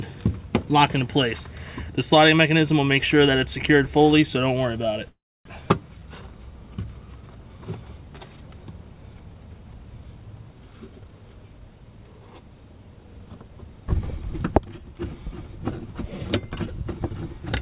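At 5.08 s a call audio freeze begins. The last sound smears into a fading buzz, then about 0.27 s of near-silence follows. The audio resumes at 5.47 s, about 0.37 s late with nothing skipped. The likely cause is delayed packets emptying the jitter buffer. The waveform shows a decaying tail and then a flat line. The spectrogram shows stretched bands fading to a blank column, all below the 4 kHz ceiling of the call path.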